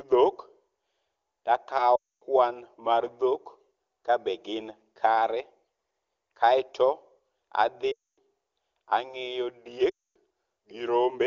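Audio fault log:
1.96 to 2.24 s, 7.92 to 8.18 s and 9.89 to 10.16 s: lost AMR speech frames. In each gap of about 0.26 s, which fits a run of roughly 13 consecutive 20 ms frames failing their check, the decoder repeats the last good pitch and vocal tract settings with shrinking gain. The speech smears briefly and fades to silence quickly, as wideband concealment does, then returns weak and rough. Because the AMR wideband (HD Voice) coding at 23.85 kbit/s is clean elsewhere, these stand out as isolated losses. A plain dropout would cut straight to silence with no smeared tail.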